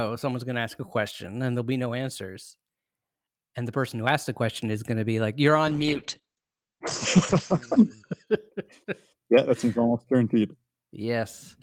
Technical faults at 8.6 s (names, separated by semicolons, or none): call bitrate drop